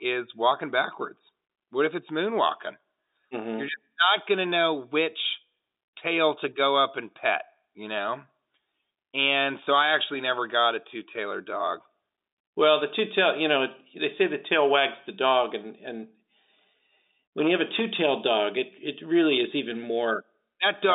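Listening to this telephone-band speech, nothing stood out.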